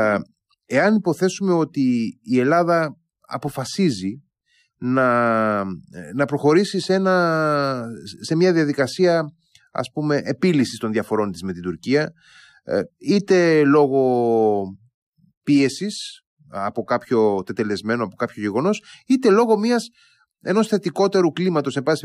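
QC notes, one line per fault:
Nothing stood out on listening to the speech in this clip.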